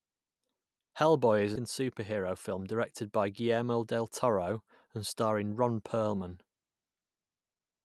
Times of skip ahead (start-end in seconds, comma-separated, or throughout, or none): 1.55